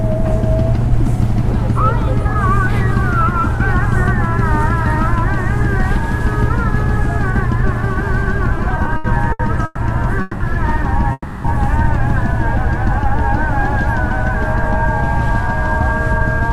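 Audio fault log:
8.57–9.79 s, repeated stalls (stutter): the sound halts ten times in just over a second, with the longest hold about 120 ms. In total 340 ms is filled in, roughly 28% of the span, and nothing is lost. Packets kept arriving behind the playback rate, so the jitter buffer emptied repeatedly. Each time the receiver stretched the last sound until more data came, which makes the passage drag and stammer.
10.21–10.42 s and 11.12–11.46 s, call audio freeze: the sound stops moving forward and turns into a sustained, fading continuation of its last moment, lasting 190 ms and then 320 ms. The second freeze decays to about 30 ms of silence before the sound resumes. Playback then picks up exactly where it stopped, so nothing is dropped and the clip is pushed later by the same amounts. The likely cause is packets held up in transit draining the jitter buffer.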